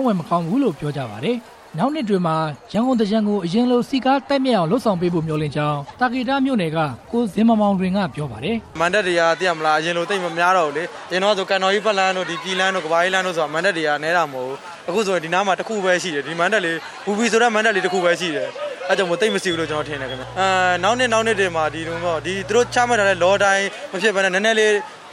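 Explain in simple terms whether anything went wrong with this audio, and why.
Something in the recording chain picked up electricity from the power supply, most likely through a ground loop or a nearby transformer. From about 19.5 to 23.4 seconds, this mains hum sits under the audio as a steady low buzz at 60 Hz, the frequency of the wall current, with a few low overtones above it.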